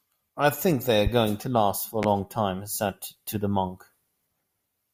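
A likely voltage spike, such as a plug, switch or static discharge, produces two loud pops in this speech clip, at 1.07 to 1.10 s and 2.03 to 2.06 s, peaking roughly 10 and 15 dB above the speech.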